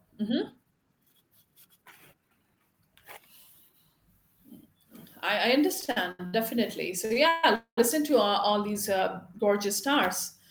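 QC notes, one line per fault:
5.80–6.34 s, repeated stalls (stutter): the speech drags and catches five times in just over half a second. Each catch holds a sound briefly, and the longest hold, about 77 ms, fades before the speech resumes. About 248 ms of the span, nearly half, is filled-in continuation rather than new audio. Packets kept arriving late, so the jitter buffer emptied repeatedly and the receiver stretched the last sound each time. Nothing is dropped; the speech just falls behind.
7.05–7.11 s and 7.13–7.16 s, short stall from a late packet: two quick hitches in close succession, each holding a sound slightly too long with a slight buzz or dip. The first lasts 50 ms and the second 21 ms. Each time a packet was due and hadn't arrived, so the jitter buffer ran dry. The receiver extended the sound it already had until the packet turned up, then carried on from the same point. Each stall adds delay rather than cutting audio.
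7.28–7.44 s and 7.55–7.78 s, call audio freeze: the speech stops moving and is replaced by a held buzz or hiss continuing the last sound. The first freeze lasts 148 ms. The second lasts 221 ms and fades into about 120 ms of silence before the speech resumes. The likely cause is packets held up in transit, leaving the jitter buffer empty while the receiver padded the wait. The speech then picks up exactly where it stopped, so a gap is inserted and nothing is lost.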